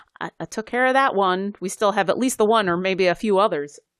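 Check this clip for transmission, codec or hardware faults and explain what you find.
No faults detected.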